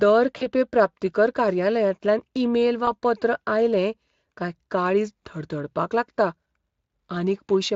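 A speech clip, carried over Speex at light quality loss, suffers VoIP packet loss concealed by the speech codec. At 0.37 to 0.47 s, a gap of about 40 ms (likely two lost frames) is extrapolated into a fading sound just before "प्राप्तीकर कार्यालयांतल्यान ईमेल". At 2.85 to 2.89 s, a shorter 20 ms dropout briefly smears the sound between "प्राप्तीकर कार्यालयांतल्यान ईमेल" and "पत्र आयलें कांय काळीज".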